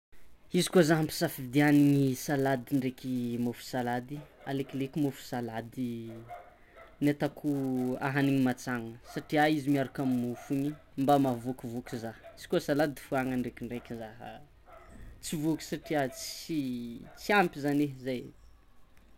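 It's a speech clip with a low buzz running under it the whole way through, pitched at about 172 Hz and rising and falling with the level of the talking. That's the classic sign of a filter restarted on every block: the filter drops its state at each block boundary and starts from silence, so every block opens with a tiny transient. A 172 Hz repeat rate fits a 256-sample block.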